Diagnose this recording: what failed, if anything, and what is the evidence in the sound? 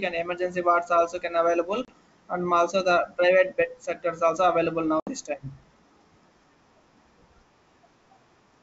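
Network stage: packet loss on an ADPCM call. Two hard-edged silent gaps appear, one at 1.85 to 1.89 s with about 30 ms of audio missing, and a longer one at 5.00 to 5.13 s with about 70 ms missing, which fits a few packets and then several packets dropped. The wideband band-split coding, consistent with G.722 at full rate, keeps speech clear up to 7 kHz. After each hole, the speech resumes slightly distorted because the decoder's adaptive predictor and step size have drifted from the sender's. It then settles within tens of milliseconds.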